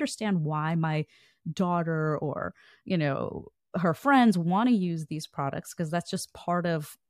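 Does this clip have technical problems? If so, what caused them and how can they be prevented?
No, there are no technical problems to point to in this speech clip. With no fault present, there is nothing here that needs preventing.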